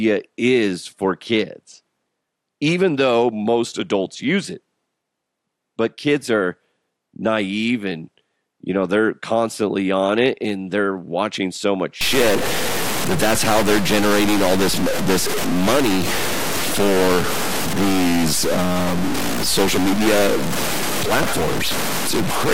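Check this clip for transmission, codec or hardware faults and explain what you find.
One hardware fault is present. From 12.01 s to the end, right after "they're watching so much", a stuck bit adds distortion and fills pauses with noise, likely from one converter data bit held at a fixed value.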